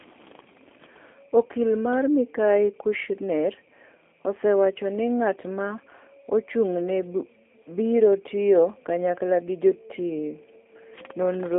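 Thin, slightly rough and synthetic speech throughout, with nothing above 3.6 kHz, points to the G.729 codec rebuilding each frame at a low VoIP rate, consistent with 8 kbit/s.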